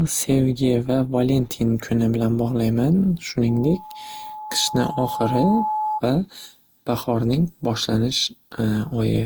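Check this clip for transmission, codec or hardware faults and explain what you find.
Two faults are audible in this speech recording.

Generation loss runs through the whole clip. The sound is swirly, smeared and hollow, and attacks blur. Content stops at 20.1 kHz. The likely cause is repeated lossy re-encoding, about four passes, which fits Opus around 48 kbit/s. Each pass requantises on a shifted frame grid, so noise and spectral gaps accumulate.

A loudspeaker feedback squeal runs from 3.48 to 6.02 s. A microphone is picking up its own loudspeaker, and the loop gain exceeds one at 855 Hz. That single tone swells over roughly two seconds into a squeal. It peaks at about 5 dB below the speech level.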